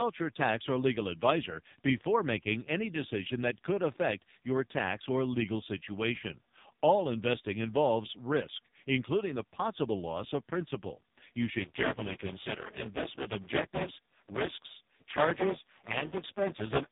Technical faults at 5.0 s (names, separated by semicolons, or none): AMR narrowband mobile codec